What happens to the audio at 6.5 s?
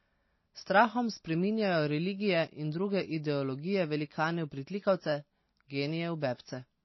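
At 6.5 s the speech carries the same damage heard across the whole clip. Nothing is left above 5.8 kHz, so the top end sounds dull and boxed in. Quieter detail seems to flicker in and out, giving a watery, swirly texture, and s sounds turn metallic. This is likely MP3 compression at a bitrate low enough to fit about 24 kbps. Short of bits, the encoder chops off the treble and drops weak frequency components from frame to frame.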